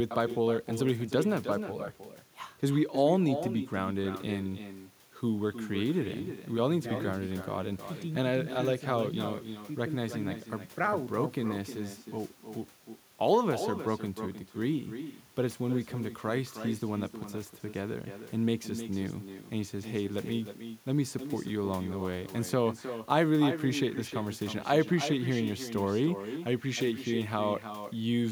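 From the start of the speech to the end, every phrase is followed by a delayed copy of itself, the classic sign of echo with no canceller. The far end is playing the call through a loudspeaker, and its microphone picks that playback up and sends it back uncancelled. The return arrives roughly a third of a second late, about 10 dB below the direct speech, and sounds thinner.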